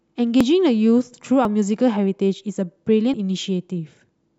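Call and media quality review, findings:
Dropped buffer (overrun) at 0.41 s, 1.45 s and 3.14 s in the speech. The speech jumps forward at each, with no gap of silence. Roughly 20 ms missing at the first two, around 70 ms at 3.14 s. Likely cause: capture side not draining the input buffer in time, so the hardware overwrote unread audio and the surviving edges were joined directly.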